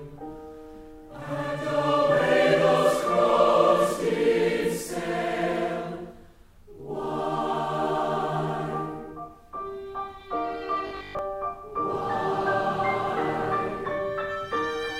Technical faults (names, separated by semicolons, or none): robotic sound from repeated short buffers